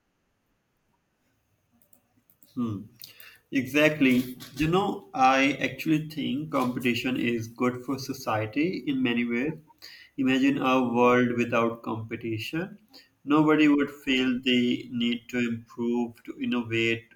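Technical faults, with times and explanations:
No technical faults detected in this speech recording.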